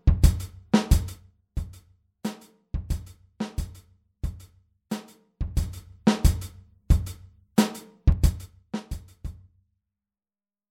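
A ticking, zipping texture rides on the sound three times: from 1.04 to 1.44 s as the level drops by about 10 dB, from 5.4 to 5.96 s as it rises by about 10 dB, and from 8.04 to 8.96 s as it falls by about 15 dB. This is zipper noise. Each level move is made in unsmoothed 3 dB jumps, about ten and then about seven per second, and every jump leaves a small click.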